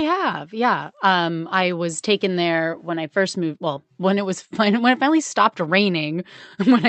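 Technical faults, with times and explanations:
Nothing stood out on listening, and the speech carries the familiar character of a call path with its top end capped at around 8 kHz.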